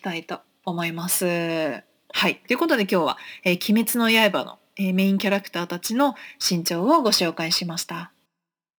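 Throughout the speech runs a crude rate conversion. Samples were dropped rather than filtered, in a way that fits a 48 kHz to 44.1 kHz conversion. The result is a gritty, inharmonic fizz about 20 dB below the speech. Unlike steady hiss, it rises and falls with loud, bright sounds.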